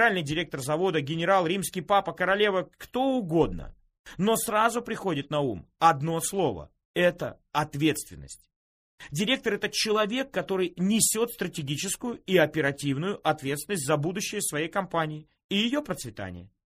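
From 5.5 s to the end, a steady tick at 10 Hz, one per 100 ms block, marks a resampler restarted on every block, consistent with a 48 kHz to 44.1 kHz conversion. With neighbouring samples missing at each edge, the waveform shows small steps every 100 ms, and the spectrogram shows faint vertical broadband lines at that spacing wherever signal plays.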